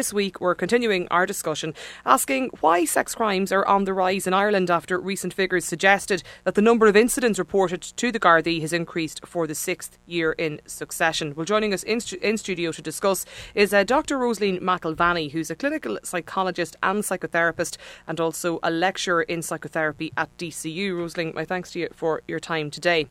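Speech recording with a mains buzz running underneath the whole thing: a raspy 60 Hz hum and its harmonics, well below the voice, from switching spikes leaking in through a dimmer, rectifier or poor shielding.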